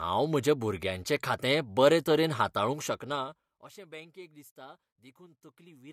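A speech recording with zipper noise between 2.73 and 3.84 s, after "खातें बरे तरेन" and before "बँकेक दिसता": the level falls by roughly 25 dB in unsmoothed 2 dB steps, about ten per second, each leaving a small click. The waveform shows a staircase envelope, and the spectrogram shows faint vertical broadband lines at each step.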